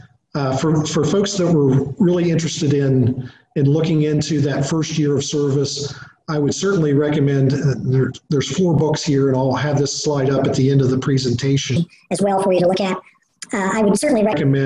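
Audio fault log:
11.76–14.33 s, wrong sample rate: the samples are sent out faster than they were captured, with no rate conversion, and the ratio fits audio made at 22 kHz being played at 32 kHz. Every waveform cycle is compressed in time, so the sound runs about 1.45 times too fast and its pitch rises together with the speed by about 6.45 semitones, giving a raised, rushed quality over this stretch.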